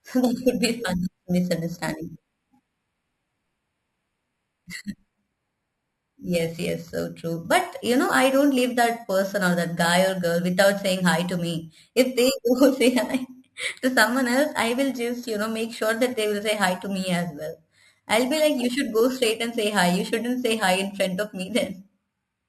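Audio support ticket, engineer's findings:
Upsampler in the chain repeating each sample, no interpolation filter. Imaging from sample-and-hold upsampling, 12 kHz to 48 kHz, throughout. Mirrored speech spectrum at about 16 dB below signal, first image 6–12 kHz. Symptom: bright metallic fizz tracking speech level, lowest image moving opposite to pitch. Component: sample-rate converter. Fix: proper anti-imaging filter.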